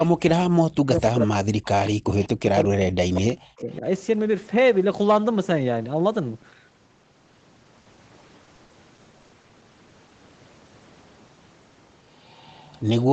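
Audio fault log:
0.47–2.33 s and 2.54–3.84 s, speech suppressed in double talk. The voice sinks by roughly 40 dB at its deepest, about 1.5 s and 1 s affected in total. Both sides were likely talking at once. The echo canceller then turned the near talker down with the echo.
1.85 s, 2.22 s, 3.58–3.76 s and 12.29–12.8 s, echo leak. A faint delayed copy of the voice follows about 196 ms behind. It sits about 20 to 30 dB below the speech. A loudspeaker echo likely slipped past the far side's canceller and was sent back.
7.81–9.51 s, repeated packet loss (robotic sound). Thirteen short holes come in quick succession, the longest 60 ms. About a fifth of this stretch is patched by stretching the last sound. That gives a choppy texture with pieces missing.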